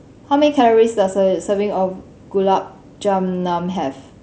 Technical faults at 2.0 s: concealed Bluetooth headset packet loss

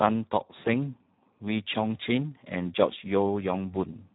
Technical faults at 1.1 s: Speex codec

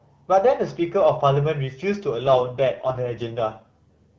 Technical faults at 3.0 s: AMR rate drop

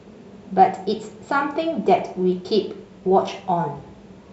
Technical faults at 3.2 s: none

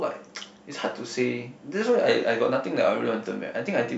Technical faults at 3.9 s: none

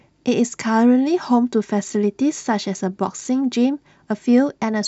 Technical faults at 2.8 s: none

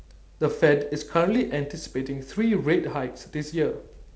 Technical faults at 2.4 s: none

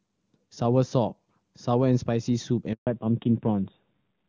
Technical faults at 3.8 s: fallback to narrowband

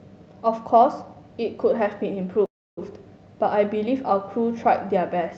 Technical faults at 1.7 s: none

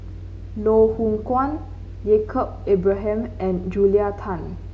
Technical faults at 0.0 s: none

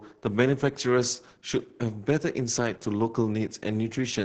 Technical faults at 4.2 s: Opus voice compression

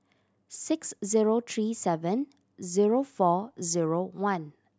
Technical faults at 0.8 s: none

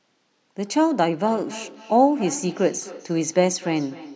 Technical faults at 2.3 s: feedback echo between two devices

